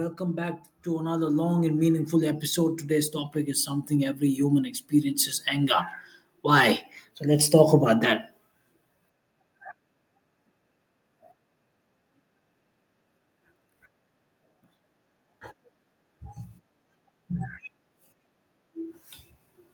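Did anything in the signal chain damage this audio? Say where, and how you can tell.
Yes, an automatic gain rising fault in call processing, from 0.17 s to 5.78 s. The AGC judged the input too quiet and raised gain by about 14 dB, lifting speech and background together. The waveform envelope ramps upward, and the spectrogram's noise floor brightens alongside the voice.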